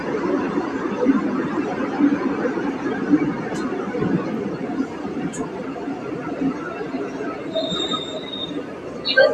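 Throughout, a noise suppressor applied to sounds treats sustained tones and decays as noise, pulling them down by several decibels, so tails sink and the level pumps audibly.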